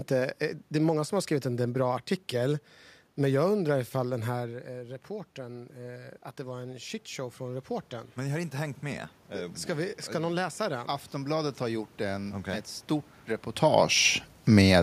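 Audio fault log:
4.06 to 12.75 s, automatic gain rising: voice and room noise swell together slowly over more than eight seconds. The input fell by about 14 dB as the talker moved back, so the gain control crept upward by about 12 dB.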